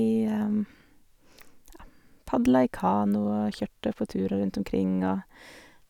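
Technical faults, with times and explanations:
No technical faults can be heard in the speech.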